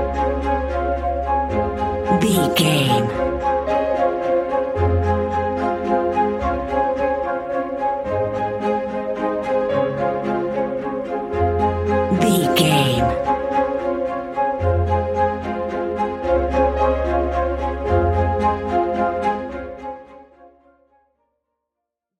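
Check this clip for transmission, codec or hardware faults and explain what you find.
Nothing here points to a transmission, codec or hardware problem; the smooth fade-out over roughly the last three seconds is an ordinary edit, tapering with no click or hard edge.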